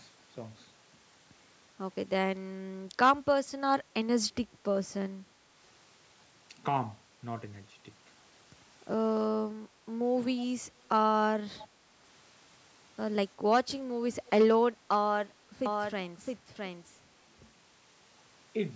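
At 11.59 s and again at 14.26 s, brief echo leak appears: short scraps of speech return 348 ms late, faint at first and fainter still the second time. The far end's echo canceller likely let loudspeaker sound reach its microphone. Unlike a doubled track, these are fragmentary and intermittent.

From 15.66 s to the end, a doubled audio track sets in abruptly. A full-band copy of the speech trails about 0.7 s behind, only a little quieter, with no decay or room colour. A second, slower capture path likely mixed it in. It stays steady and continuous, unlike the scattered echo.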